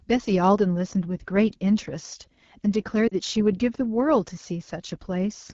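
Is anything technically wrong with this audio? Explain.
Yes, there are two faults. Throughout the clip the speech sounds rough and raspy. This is AMR wideband (HD Voice) codec damage. AMR-WB models speech below 6.4 kHz as a pulse-excited vocal tract filter and fills the 6.4 to 7 kHz band with shaped noise. The strength of the damage fits one of its low-rate modes, around 8.85 kbit/s, where too few bits remain to describe the excitation properly.

From 3.07 to 3.14 s the speech briefly smears and sags, a short blur that dips in level for about 40 ms. These are lost AMR speech frames. Corrupted frames failed their checks, and the decoder filled the gap by repeating the last good pitch and vocal tract parameters at decreasing gain. The gap fits roughly two 20 ms frames, within which the sound drops to near silence.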